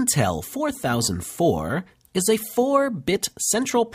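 No technical faults detected.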